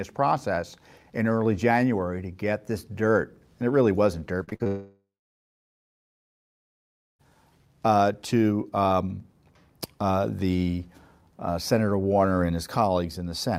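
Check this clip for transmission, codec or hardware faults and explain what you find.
Two transmission faults appear, back to back in the middle of the speech.

Repeated packet loss (robotic sound) runs from 4.43 to 4.67 s, starting right after "and it really wasn't". Audio kept going missing in short holes, the longest 42 ms. Each hole was patched by stretching the last bit of received sound before the next one hit. About half of that quarter-second is filled-in material, so the sound turns choppy and mechanical, with fragments missing.

A long network dropout follows, from 4.67 to 7.26 s, ending just before "uh to um". The sound first carries on as a brief continuation of what came before. It then falls to silence for about 2.1 s before the audio resumes. This is likely a stretch where no audio reached the receiver, which extended the last sound, let it fade out, and then carried on without the lost section.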